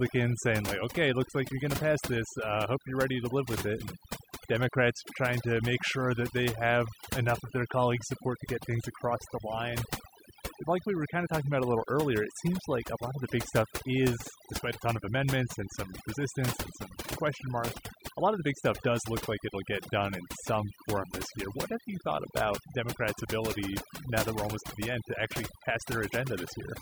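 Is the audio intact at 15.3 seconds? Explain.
No. Overdone noise removal affects the speech at 15.3 seconds, as it does throughout the clip. A noise reduction process set too aggressively is cutting individual frequency bands down or out whenever their level sits close to its noise estimate, and the softer parts of the speech fall into that range too. The background drops and breaks up into twinkling, warbling specks.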